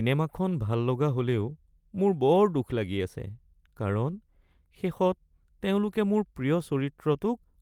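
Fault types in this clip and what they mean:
No faults can be heard.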